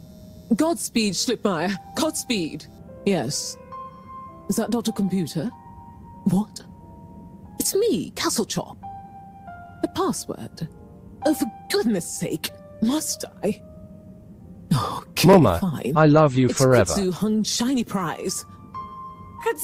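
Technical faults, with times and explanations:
No technical faults can be heard in this recording.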